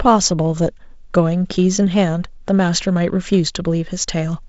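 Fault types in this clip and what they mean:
No faults detected; the speech passes through G.722 wideband coding at 48 kbit/s with light coding damage and nothing above 7.7 kHz.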